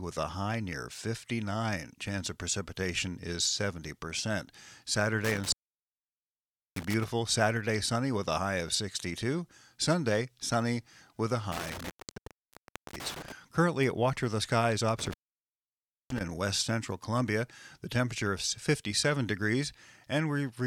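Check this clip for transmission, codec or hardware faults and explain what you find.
The speech drops out three times from intermittent contact. Between 5.24 and 7.04 s, 11.52 and 13.32 s, and 14.99 and 16.21 s, a loose plug or cable connection briefly breaks the signal path, leaving the line open for about 1.24 s, 1.04 s and 0.97 s. Each dropout starts and ends with crackle as the contact scrapes. Faint hiss remains during the gap. On a waveform the signal collapses to a thin noise floor between spiky edges. A spectrogram shows dark gaps bordered by broadband vertical streaks.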